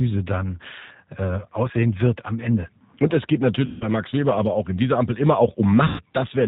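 G.729 codec damage runs through the whole speech clip and is plainly audible. The coder rebuilds the voice from a vocal tract filter, a pitch predictor and a handful of pulses in each 5 ms subframe, so the timbre turns slightly rough and synthetic, and nothing above 4 kHz survives, leaving a muffled, band-limited sound. That combination points to the G.729A variant at around 8 kbit/s.

VoIP packet loss concealed by the speech codec occurs first from 3.66 to 3.90 s, right after "es geht". About 150 ms of audio is missing, which fits five lost packets. The decoder keeps extrapolating from the last pitch and filter it received while lowering the gain, so the voice smears into a fading buzzy tone or coloured noise, and because each frame builds on the one before, the speech stays weak briefly after the packets return.

The same concealment returns from 5.87 to 6.02 s, covering about 120 ms, consistent with four dropped packets. 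Once again the sound stretches into a decaying buzzy tone or coloured noise, and the recovery that follows is weak or distorted.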